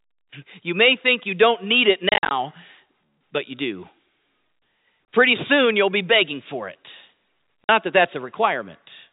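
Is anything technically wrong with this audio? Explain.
Yes. The clip has packet loss filled with silence. Just after "you don't need it", from 2.09 to 2.31 s, 140 ms of audio drops out in scattered gaps, the longest 50 ms. Shorter holes follow at 5.05–5.08 s (30 ms) and, after "be begging for it", at 7.64–7.69 s (50 ms). Lost packets were replaced with zeros, and the gap sizes suggest 10 ms packets. The sound is chopped, with hard-edged gaps. A waveform shows flat silent gaps, and a spectrogram shows blank vertical slices. The narrow telephone band of the G.711 coding can still be heard around them.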